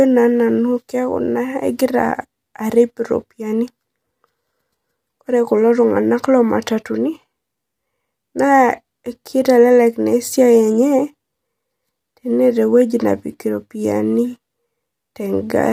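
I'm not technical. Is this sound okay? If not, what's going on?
No. The speech was likely squeezed by low-delay AAC compression, the kind video calls use, so throughout, voices sound rough and grainy, with a dulled or artificial-sounding top end.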